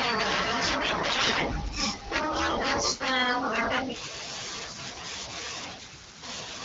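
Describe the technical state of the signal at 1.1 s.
At 1.1 s the speech is inside a burst of AMR bit errors running from 0.83 to 1.43 s. A large share of the weakly protected frame bits, roughly one in seven, arrive flipped, so pulse positions and fine pitch, gain and spectral values decode wrongly. Pitch and level roughly hold, but the sound turns hoarse, scratchy and gargly.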